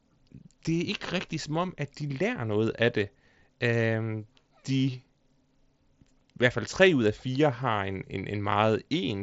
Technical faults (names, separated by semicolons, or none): none